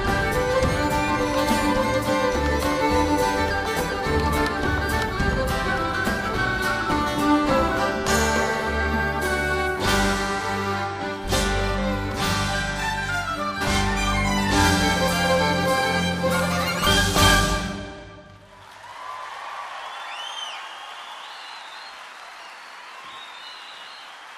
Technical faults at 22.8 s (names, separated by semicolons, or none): none